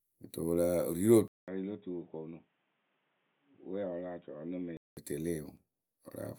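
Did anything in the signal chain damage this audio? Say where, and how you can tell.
Yes. An input switched to a poorer device, at the driver and device stage, from 1.28 to 4.97 s. A 200 ms gap opens, then the speech turns dull, has nothing above 3.8 kHz, drops a few dB and carries faint new background noise, likely a narrower-band microphone path.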